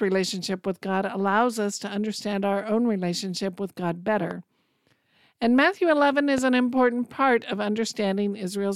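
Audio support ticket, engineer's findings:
Loud pop, two single events at 4.31–4.33 s and 6.38–6.40 s, each peaking about 10 dB above the speech, which continues underneath. Likely a voltage step from a plug, switch or static. Waveform: isolated spike. Spectrogram: thin full-band vertical stripe.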